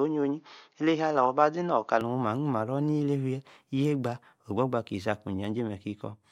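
From 0.00 to 2.01 s the speech is band-limited, with nothing above 6.8 kHz, and a faint noise floor sits far below it; likely an input switched to a poorer device.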